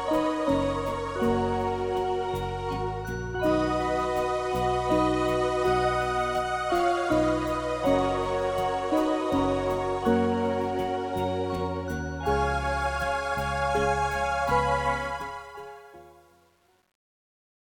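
From 14.94 s, the fade-out picks up truncation distortion. The level stage drops low-order bits without dither, which fits roughly 9-bit resolution, so the decaying waveform collapses into coarse steps. From 15.42 s to the end it turns gritty. Unlike a dropout or clipping, the breakup tracks the falling level and worsens as it gets quieter.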